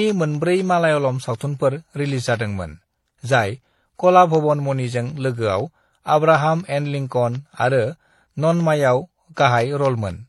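Throughout the speech, nothing reaches above 12 kHz, and two kinds of coding damage are layered: MP3-style swirl and smearing beneath HE-AAC's metallic, synthetic highs. Hearing both signatures at once, rather than one, likely points to transcoding between lossy codecs, MP3 into HE-AAC.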